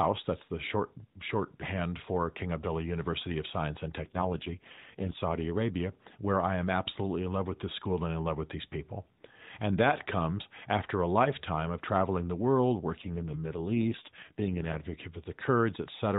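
From 4.04 to 5.20 s, and again from 13.02 to 14.82 s just after "of traveling the world", the speech turns rougher and buzzier without losing band or dropping out: an AMR rate drop, which fits the codec falling from 12.2 to 4.75 kbps on a weak link.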